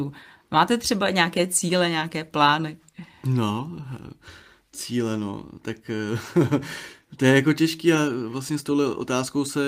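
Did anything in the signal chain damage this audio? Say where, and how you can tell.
No, nothing in this speech recording stood out on listening as damage from any stage of the chain.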